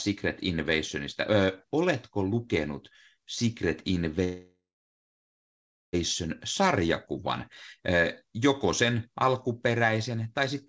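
Call audio freeze in this speech from 4.24 to 5.95 s: sound trails into 1.31 s of silence, likely from delayed packets emptying the jitter buffer, then resumes intact.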